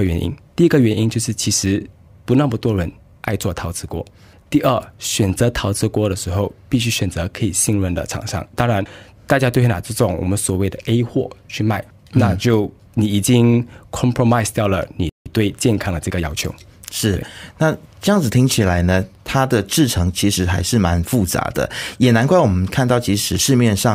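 At 15.09 s the speech cuts out for about 0.16 s in a playback stall, most likely the player running short of buffered data or its thread being blocked. The waveform drops to a flat line and the spectrogram shows a clean vertical blank before the sound resumes.

From 15.26 s to 16.88 s comes time-compressed catch-up, as the player works off its backlog by splicing out small pieces and cross-fading the joins. Speech runs about 1.1 times fast at unchanged pitch; spectrogram harmonics stay level while syllables sit closer together.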